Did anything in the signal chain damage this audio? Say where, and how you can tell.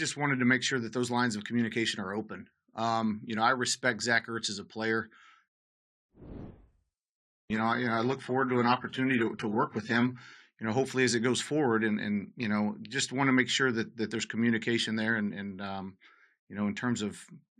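Yes. An adaptive stream at a lower bitrate damaged the speech at the network and codec stage, from 6.46 to 10.46 s. At the start the quality drops abruptly, and the codec artefacts thicken for those four seconds. The drop hits just before "you know hopefully as". The sound fits a switch from roughly 96 kbit/s AAC to a 12 kbit/s HE-AAC rendition. Unlike packet loss, there is no gap or dropout, only the sudden quality step.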